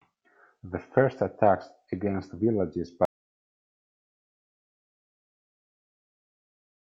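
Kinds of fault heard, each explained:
Audio dropout to silence: at 3.05 s the speech cuts off mid-flow and the rest of the clip is silent, with no room tone or noise floor, most likely because the input was lost while recording continued to write silence.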